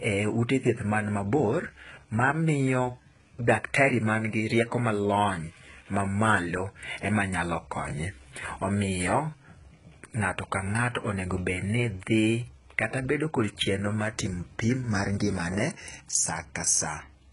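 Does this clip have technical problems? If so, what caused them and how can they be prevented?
Yes. Throughout, the sibilants sound gritty and lispy, and nothing reaches above 11.1 kHz. This is likely HE-AAC compression at a very low bitrate, around 12 kbps, where copied-up treble replaces the real one. Unlike a plain low-pass, the top still sounds bright but wrong. Encoding at a higher bitrate with standard AAC prevents it.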